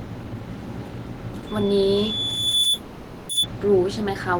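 A speech clip carrying two overlapping faults. From 1.46 s to 3.47 s there is loudspeaker feedback squeal: a pure tone at 3.5 kHz swells over roughly a second until it sits about 5 dB above the speech. The microphone is hearing the loudspeaker it drives, and at that one frequency the loop gain tops unity, so the tone feeds itself. On a spectrogram it is a single bright horizontal line at 3.5 kHz that thickens as it grows, and the waveform envelope rises steadily under the speech. Inside that span, from 2.73 s to 3.31 s, comes a call audio freeze. For 560 ms the speech stops moving and the last sound is stretched into a fading buzz or hiss rather than silence. The likely cause is packets stalling in transit and the jitter buffer running dry. When the audio resumes, it picks up exactly where it stopped, so nothing is lost, but everything after arrives 560 ms late. A spectrogram shows a smeared, static band with no syllable structure, and the waveform shows a decaying envelope before normal modulation returns.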